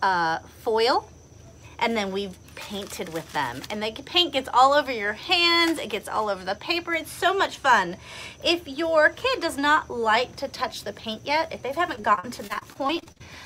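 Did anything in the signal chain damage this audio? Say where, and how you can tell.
Yes. Near the end of the clip, from 11.95 to 13.22 s, the network stage damaged the audio with repeated packet loss, which gives it a robotic sound. The sound turns choppy there. It breaks into fourteen short holes, the longest about 42 ms. The receiver patched each hole by stretching the last good sound forward. About a quarter of that stretch is this patched filler, roughly 300 ms in all. You can tell from the rapid stutter and the buzzy, synthetic timbre.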